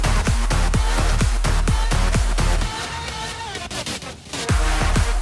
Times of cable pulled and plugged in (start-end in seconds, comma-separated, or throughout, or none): none